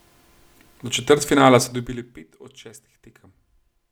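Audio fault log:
1.58–2.23 s, zipper noise: the level drops by roughly 20 dB, but in bare steps of about 1 dB, around twenty a second, instead of a smooth glide, so each jump clicks and the fade gets a ticking, zippy buzz on the speech.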